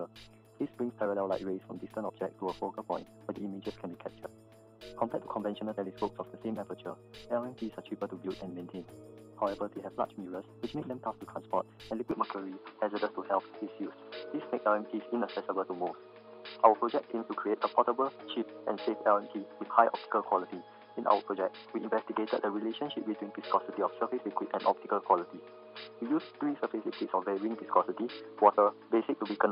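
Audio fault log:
12.11–29.51 s, input switched to a poorer device: sound dulls, nothing above 5.1 kHz, level shifts about 5 dB, faint new noise; likely a narrower-band microphone took over.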